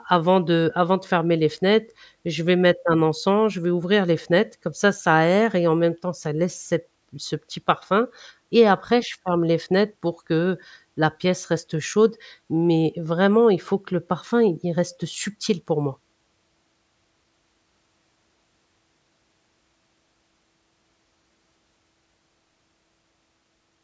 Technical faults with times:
none

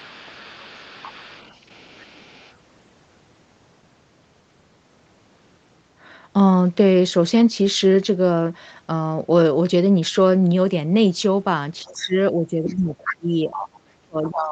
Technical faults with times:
0.00-2.54 other side's voice leaking through
11.83-14.51 speech suppressed in double talk
12.93-13.13 other side's voice leaking through
13.57-13.78 other side's voice leaking through
14.26-14.30 other side's voice leaking through

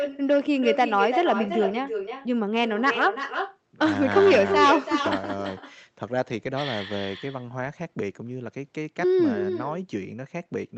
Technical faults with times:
0.00-10.77 echo with no canceller

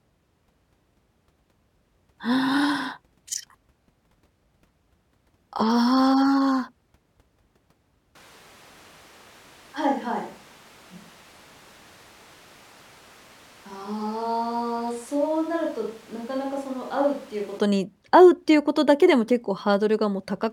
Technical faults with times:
8.15-17.59 switch to a distant microphone

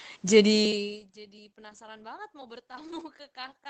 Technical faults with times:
1.69-1.79 lost packet rebuilt from error correction
2.67-2.71 short concealed packet loss
2.71-3.01 lost packet rebuilt from error correction

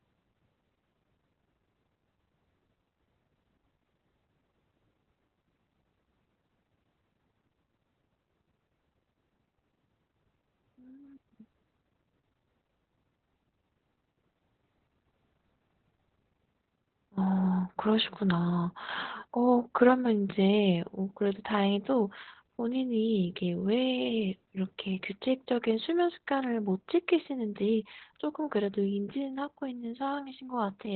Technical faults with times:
0.00-30.96 Opus voice compression

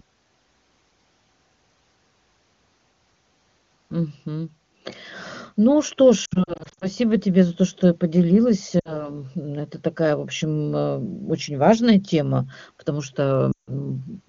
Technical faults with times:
6.25-6.89 lost AMR speech frames
8.79-9.14 lost AMR speech frames
13.52-13.73 lost AMR speech frames

